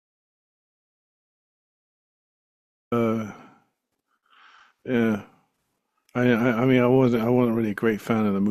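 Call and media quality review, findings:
Audio dropout to silence, 0.0 to 2.92 s, already under way when the clip opens. Silent, no room tone. Speech enters abruptly at 2.92 s. Likely input loss upstream (device disconnect, link failure or mute) while the encoder kept writing silence. Content in gap unrecoverable.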